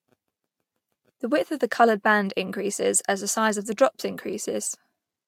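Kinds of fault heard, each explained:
No technical fault can be picked out anywhere in this speech recording. Nothing in the sound points to a problem with how it was captured or delivered.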